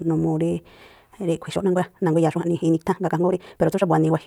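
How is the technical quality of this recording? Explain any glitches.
The recording has one clear fault: a time-stretched section running from 1.39 s to the end of the clip. At 1.39 s the speech abruptly jumps to almost double pace, about 1.93 times faster, while the pitch stays where it was. The likely cause is software squeezing the audio to fit a shorter length, cutting out short slices and splicing the remainder together so the pitch is preserved. The result sounds rushed. On a waveform, the syllable envelopes after 1.39 s are packed tightly together. On a spectrogram, the harmonic bands stay at the same heights, but their patterns compress horizontally and show small seams where pieces were dropped.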